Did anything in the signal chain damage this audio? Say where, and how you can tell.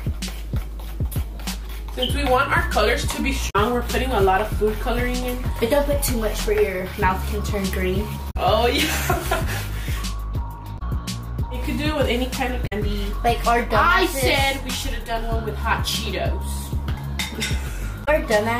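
Yes, at the codec or storage stage: damaged data in a compressed stream. Five brief faults occur at 3.46–3.56 s, 8.27–8.36 s, 10.75–10.82 s, 12.63–12.73 s and 18.01–18.08 s. Each lasts about 70 to 95 ms. Corrupted bytes in the encoded stream cause the decoder to misread those frames and lose sync until it locks onto the next valid frame header, which produces these short disturbances in the audio.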